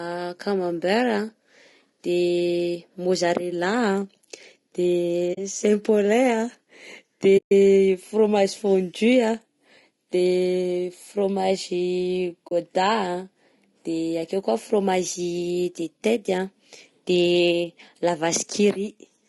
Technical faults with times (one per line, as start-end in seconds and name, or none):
0.00-19.29 low-delay AAC compression
5.33-5.38 AAC frame loss with muting
7.37-7.52 AAC frame loss with muting
12.47-12.52 AAC frame loss with muting